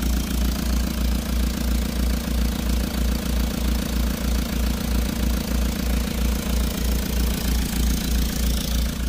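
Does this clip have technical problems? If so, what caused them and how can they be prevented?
Yes, there's mains hum throughout, a steady 60 Hz tone about as loud as the sound itself, from a ground loop or nearby transformer. Fix grounding and reroute cables.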